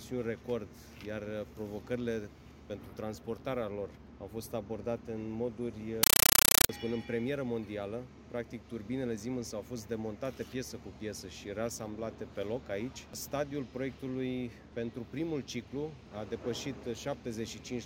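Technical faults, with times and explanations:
6.03–6.69 s, compressed stream played as audio: loud chattering static replaces the sound. An undecoded Dolby Digital stream, which fits AC-3 at 384 kbps, is being treated as samples. Each 8 ms noise burst is followed by zero padding, 31.25 times a second. That steady rattle with silent gaps sets it apart from random hiss or distortion.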